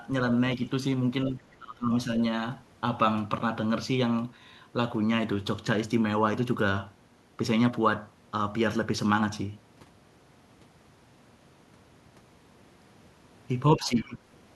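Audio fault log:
1.3 to 2.1 s and 13.76 to 14.25 s: speech suppressed in double talk. The speech dips by roughly 20 dB, around half a second in each stretch. The likely cause is an echo canceller that couldn't tell the talker from loudspeaker echo while both spoke. So it turned both down.
14.01 to 14.14 s: other side's voice leaking through. A faint second voice comes through, far below the main speech. It is a brief scrap. It is likely residual loudspeaker sound the echo canceller failed to remove from the microphone.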